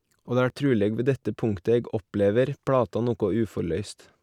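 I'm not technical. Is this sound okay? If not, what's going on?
Yes, nothing stood out as a problem when listening to this recording.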